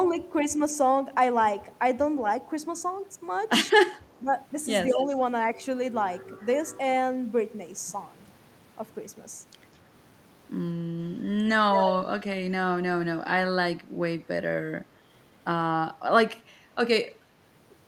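Right at the start, from 0.57 to 0.61 s, the speech briefly dips by roughly 5 dB for about 40 ms, which is most likely speech suppressed in double talk: the echo canceller couldn't tell this talker apart from the far-end signal and pulled everything down together.

Then there's echo leak, a delayed copy of the voice trailing by about 0.2 s (198 to 215 ms). It's probably a loudspeaker setup whose canceller let some pickup through. It's barely audible at 4.17–4.21 s and 17.15–17.20 s, clearer at 4.89–5.06 s, and strongest at 11.73–11.96 s, nearly as loud as the speech itself.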